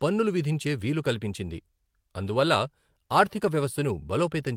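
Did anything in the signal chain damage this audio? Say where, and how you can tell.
No, nothing in this speech recording stood out as damage from any stage of the signal chain on listening.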